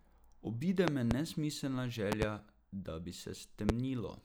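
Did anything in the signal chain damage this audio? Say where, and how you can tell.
Yes. Loud pops hit the speech three times. A double pop runs from 0.88 to 1.14 s, peaking far above the speech, around 25 dB. Another double pop sits at 2.12 to 2.25 s, just before "da bi". A single pop at 3.69 to 3.72 s follows "da bi". The last two peak around 20 dB above the speech. The speech continues beneath each one. These are likely voltage pulses in the analogue wiring, from a plug, switch or static.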